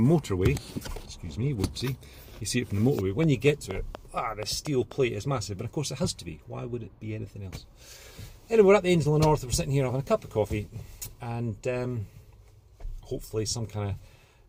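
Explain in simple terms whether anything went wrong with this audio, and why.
A train of clicks runs from 2.99 to 4.93 s: about ten sharp ticks, arriving at a steady 4.15 per second, each one poking out louder than the surrounding audio. Because the clicks share the same shape and keep an even rhythm, they aren't part of the recording itself. They are most likely a repeating electrical pulse, such as interference from nearby equipment or a faulty connection or power supply, stamping itself onto the signal for those two seconds.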